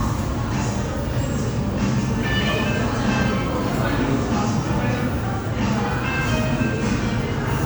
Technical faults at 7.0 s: generation loss

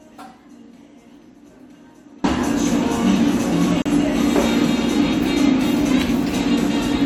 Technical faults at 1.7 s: audio dropout to a faint residue

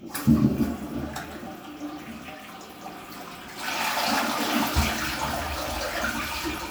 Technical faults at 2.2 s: none

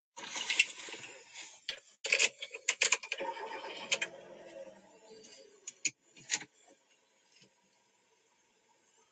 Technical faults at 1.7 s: noise suppressor applied to music or sounds; short concealed packet loss; lost packet rebuilt from error correction

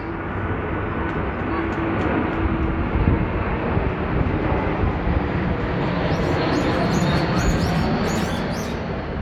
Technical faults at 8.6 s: none

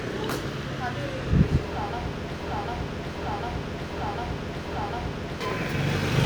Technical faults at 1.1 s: none

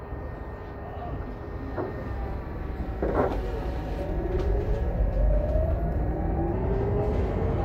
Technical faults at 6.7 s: wrong sample rate

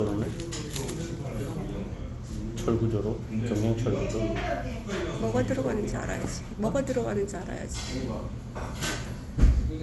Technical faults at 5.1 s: generation loss

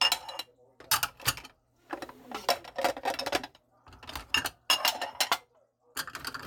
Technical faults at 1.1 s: none

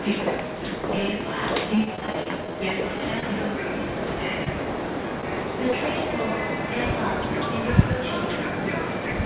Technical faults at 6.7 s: none

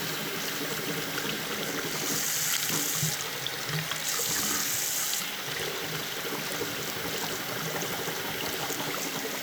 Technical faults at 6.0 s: clock drift buffer slips

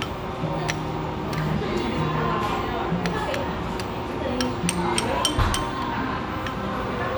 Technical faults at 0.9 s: none

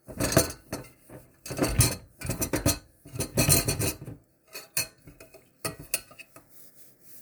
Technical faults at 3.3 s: none

